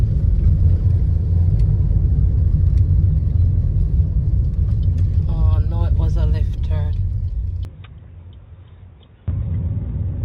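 At 7.65 s the sound changes abruptly and stays changed to the end. Everything above 3.8 kHz disappears, so the top end turns dull and boxy. The level drops by about 5 dB. A faint new background noise appears, roughly 40 dB under the signal. There is no gap at the change. This is likely an input switched to a poorer device, such as a second microphone or a headset call profile with a narrower band.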